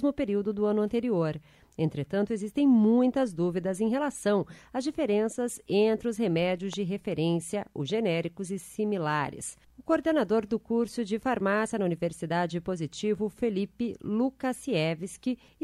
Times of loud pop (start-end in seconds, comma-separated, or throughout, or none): 6.73-6.75